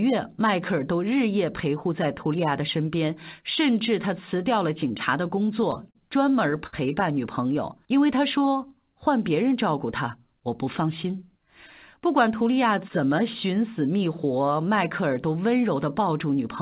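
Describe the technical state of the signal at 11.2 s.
At 11.2 s a jitter buffer speed-up runs from 10.81 to 11.41 s: short pitch-period chunks are cut to drain excess buffered audio, so the sound runs about 8% faster but keeps its pitch, unlike a resampling speed change.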